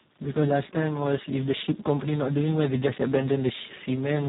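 A stage in the chain was driven about 8 dB past what it could pass, so for the whole clip the loudest peaks, roughly one sample in a hundred, are sliced flat. This hard clipping adds a brittle crackle on the peaks.

Throughout, the speech has also gone through the Speex codec at a very low quality setting, consistent with a bitrate near 4 kbps. Too few bits remain for the excitation, so the voice sounds hoarse, buzzy and noticeably robotic, and nothing survives above 3.8 kHz.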